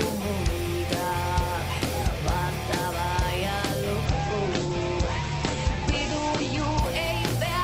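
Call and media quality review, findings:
Call bitrate drop, 4.06 to 6.87 s. Bandwidth estimate collapsed and the encoder was throttled, consistent with a fall from around 48 kbps to about 9 kbps, held at the floor for about 2.75 s. Audio bandwidth shrinks from 20 kHz to 8 kHz. Coarser coding makes the sound muffled and rough, then it recovers.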